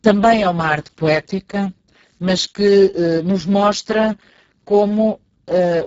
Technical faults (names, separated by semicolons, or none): Speex codec